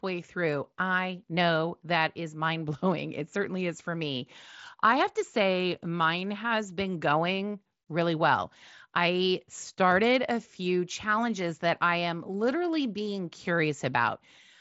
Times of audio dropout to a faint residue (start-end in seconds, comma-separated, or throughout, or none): none